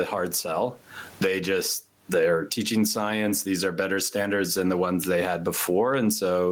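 Speech with gain pumping throughout: the gain swings by around 20 dB, and the room noise sits about 44 dB below the speech. The likely cause is input gain set far too high, with a fast limiter clamping each peak and squashing the dynamics.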